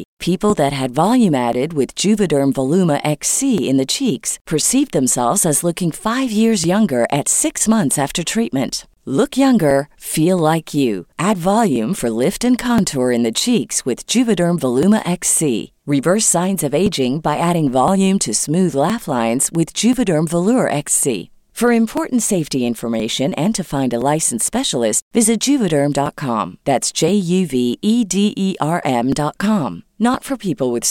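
A speech recording with regular ticks every 1.02 s from 0.50 to 30.14 s, where about two milliseconds of audio are skipped each time: periodic USB or driver dropouts.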